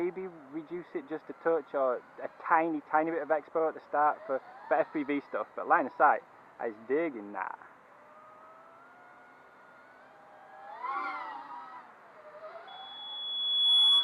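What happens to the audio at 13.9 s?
A 3.4 kHz tone swells over about a second into a loudspeaker feedback squeal, from 12.67 s to the end, around 10 dB above the sound. A microphone is picking up its own loudspeaker.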